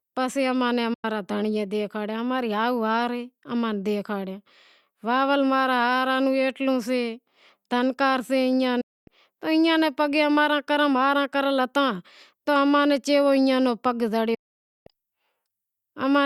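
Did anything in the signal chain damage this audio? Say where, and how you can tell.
Yes. The speech fades to silence within 8 ms three times: 0.94–1.05 s, just before "دھنڑیئے دکھاڑیا اماں ری", then 8.81–9.08 s and 14.34–14.87 s. This is a digital broadcast dropout at the receiver, which muted failed frames. The 96, 256 and 512 ms holes suggest whole 32 ms frames.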